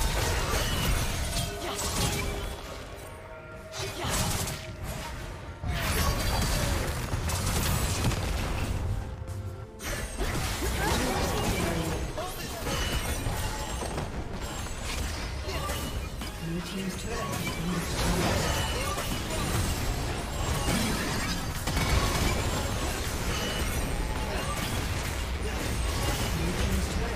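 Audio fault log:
22.86–27.16 s: mains buzz. A steady, raspy 60 Hz buzz enters, rich in harmonics reaching several kHz. Switching spikes twice per cycle cause it, sitting about 15 dB below the sound.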